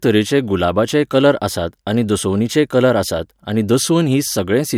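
There are no technical faults to describe at any point in the speech.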